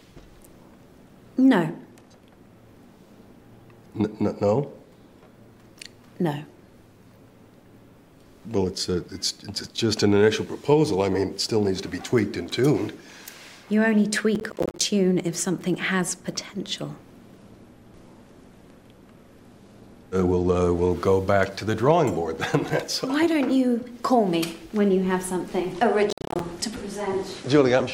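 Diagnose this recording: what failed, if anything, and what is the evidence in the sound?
Two things went wrong here. The first is a processor overload crackle at the driver and buffer stage, from 14.35 to 14.81 s and again from 26.10 to 26.40 s. Each burst is a gritty tearing made of about twenty tiny silent gaps. That fits a CPU repeatedly missing deadlines on roughly 10 ms buffers, then recovering.

The second is a Bluetooth SBC bit pool drop in the codec over the wireless link, from 17.37 to 20.90 s and again from 25.72 s to the end. The treble goes dull and a grainy noise rises. That points to the bit pool falling from 31 to 15, around 105 kbps, on a congested link.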